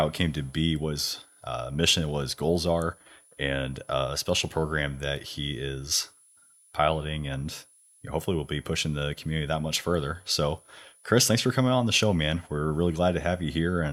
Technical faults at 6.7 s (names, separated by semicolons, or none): switching supply whistle